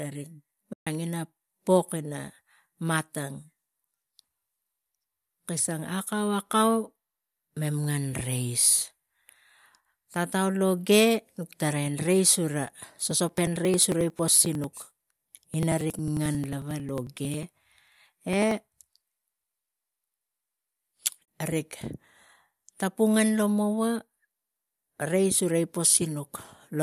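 At 0.73 s the speech falls into a soft-edged hole of 140 ms, AAC frame loss with muting: the decoder zeroed the missing spectra, which fits roughly fourteen 10 ms frames of the likely AAC-ELD stream. A waveform shows a smooth fade to flat and back; a spectrogram shows a blank vertical band. A shorter 30 ms hole of the same kind opens at 21.25 s.

From 12.66 s to 19.68 s come periodic USB or driver dropouts every 0.09 s, around seventy of them. Each skips roughly 10 ms of audio outright, so the splices tick regularly wherever speech is present. They show as evenly spaced waveform discontinuities and thin vertical broadband streaks on a spectrogram.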